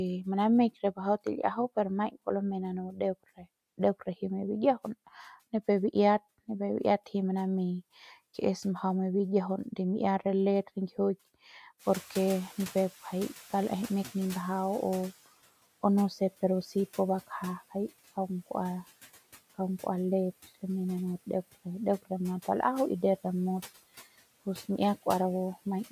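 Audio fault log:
2.88–3.00 s and 3.24–3.46 s: speech cut by the noise suppressor. Two brief stretches of the speech sound swallowed and faint, dropping by about 10 dB and then about 18 dB, roughly a tenth of a second each. The suppressor mistook these quieter parts of the speech for background noise and turned them down with it.
11.79–15.22 s: noise suppressor catching up. When the room noise jumps by about 17 dB around 12 s, it first comes through with little reduction. It then sinks over about 3.4 s as the suppressor's noise estimate adapts, ending about 12 dB lower and sitting about 21 dB below the speech.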